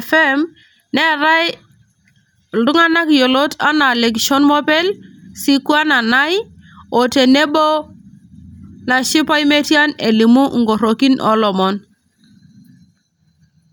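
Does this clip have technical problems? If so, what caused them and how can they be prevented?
No, this clip has no technical problems, so there is nothing to trace or prevent.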